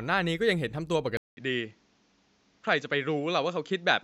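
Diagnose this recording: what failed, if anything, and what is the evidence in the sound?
At 1.17 s the speech drops out for 200 ms, then returns at unchanged level but band-limited to 7.6 kHz, duller, over a new noise floor roughly 40 dB down, through to the end. Driver stage: the input likely switched to a poorer device.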